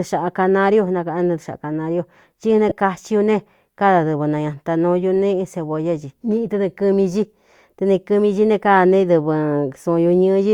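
Around 2.69 to 2.72 s there's a brief patch of lost LE Audio frames, roughly 22.5 ms, which fits three 7.5 ms frames going missing. The LC3 decoder papered over the gap by replaying the last spectrum with scrambled signs, so the speech blurs into a quick noisy smear.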